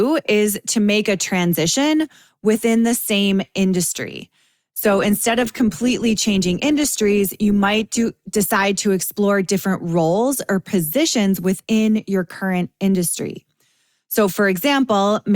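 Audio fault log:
4.65–8.65 s, adaptive stream at a lower bitrate: after "within the same industry" the quality abruptly drops, with heavier codec artefacts, then snaps back before "to explore different roles", with no gap. This fits a switch from 64 to 24 kbit/s Opus.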